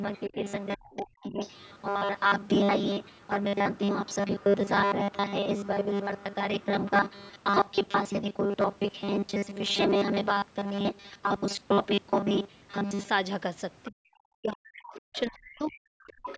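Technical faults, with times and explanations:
0.01–13.1 s, robotic sound from repeated short buffers: a rigid metallic buzz at a fixed 200 Hz rides on the speech, loosely following it. This is likely because audio arrived late and roughly 5 ms chunks were replayed in place of most of the real signal. A steady pitch like this does not occur with ordinary distortion.
0.14–1.81 s, 3.03–7.29 s, 13.84–13.91 s, 15.15–16.36 s, other side's voice leaking through: a second, faint voice sits under the talker, roughly 20 to 30 dB down. This is likely loudspeaker sound that the echo canceller failed to remove. Unlike suppression, something extra is added here.
0.29–1.41 s, 13.89–16.38 s, speech suppressed in double talk: the talker's own level sags while the other side is active, about 25 dB at worst early on and about 40 dB late, over roughly 0.7 s and 2 s. The likely cause is the echo canceller ducking both voices together. 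Here the main voice is turned down rather than something being added.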